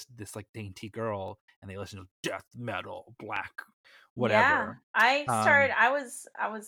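A few samples likely went missing from the stream, so the speech waveform jumps straight to a later value, losing a fraction of a millisecond. Each dropped-samples event is a single sharp click: at 1.28 s, after "this like dainty", and at 3.36 s, after "listen to death metal".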